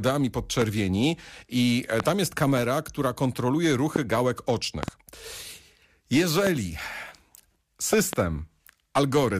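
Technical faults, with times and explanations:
0.62–0.64 s, 2.00–2.02 s, 3.96–3.98 s, 4.83–4.90 s, 6.47–6.49 s and 7.93–8.15 s: loud pops. Each is a sharp pop about 15 dB above the speech. The speech carries on underneath. The events at 4.83 s and 7.93 s are double pops. One falls after "i e" and before "tam jest kamera która". Another follows "jest kamera która kontroluje". The cause is likely a sudden voltage step or pulse added to the signal, such as static or a switch glitch.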